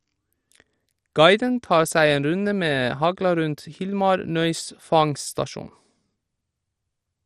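Throughout the speech, the audio has likely passed through MP2 compression with too few bits, which fits a rate near 64 kbps. The encoder drops upper sub-bands, leaving nothing above 14.3 kHz, and coarsely quantises the rest, producing a dull, plainly gurgling, granular sound.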